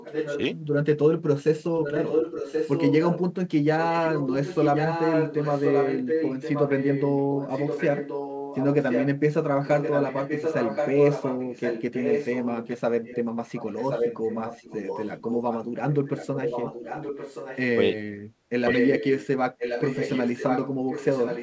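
Speech carried over a call path whose sound stops at 8 kHz, where an echo canceller on the far end likely failed to remove what its loudspeaker fed into its microphone. The result is echo leak: a copy of the speech returns about 1.07 s late, a little below the direct speech, and about equal to it at 1.83–3.21 s and 18.69–19.27 s. It appears at 0.0–0.41, 1.83–3.21, 3.91–9.08, 9.66–17.59, 18.69–19.27 and 19.58 s to the end.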